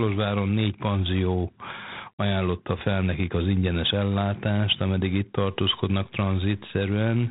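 Speech coded throughout with G.726 ADPCM at 24 kbit/s has a harsh, rasping hiss tracking its level, and a spectrogram shows a flat ceiling at 3.8 kHz. From 5.45 s to the end, grainy low bit depth without dither appears, likely 8-bit truncation, leaving noise roughly 35 dB down and a visibly stepped waveform.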